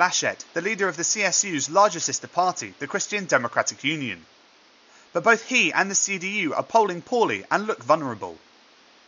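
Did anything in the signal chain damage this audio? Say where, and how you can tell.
No, nothing in the chain seems to have harmed this speech; the only extra sound is the room's own background noise, sitting about 31 dB below the voice, and that belongs to the recording space rather than to any equipment.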